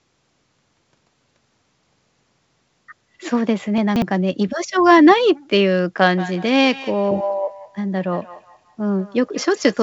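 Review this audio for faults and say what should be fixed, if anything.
Between 3.78 and 4.02 s there's a jumbled little stretch. That's chunks out of order. A 60 ms piece of audio got written late and plays after material that should come after it. Nothing goes missing, but the sequence is scrambled at hard splices. It sounds like the piece slipped about three chunk-slots back. Keep the chunks sequence-numbered and reorder them before playback or writing, so a late chunk goes back into its proper slot.

From 6.17 s to the end there's feedback echo between two devices. Two devices on the same call are sharing a room, so one plays what the other's microphone sent and that microphone sends it back. Neither echo canceller touches audio from the other device, so the sound comes round again roughly every fifth of a second, with a thin, ringing quality. At its loudest it sits about 19 dB under the direct speech. 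The sound is band-limited at 8 kHz, which fits the G.722 call codec. Make sure only one device in the room has its speaker and mic active, or have everyone there use headsets.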